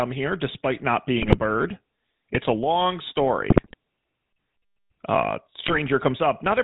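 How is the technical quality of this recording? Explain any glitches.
The speech is plainly degraded by narrowband codec coding, with three short bursts of decoding corruption.

GSM full-rate codec damage is plainly audible throughout. The codec rebuilds the voice from a vocal-tract filter driven by sparse, regularly spaced pulses, consistent with a 13 kbps full-rate stream. Nothing above 4 kHz survives, and the voice has a buzzy, gravelly roughness.

GSM bit errors occur at 1.20–1.36 s, just after "here despite not"; at 3.50–3.74 s, after "a long"; and at 5.66–5.79 s. Corrupted filter, pitch and gain parameters distort the spectrum and level frame by frame, producing squawks, pops and gargling.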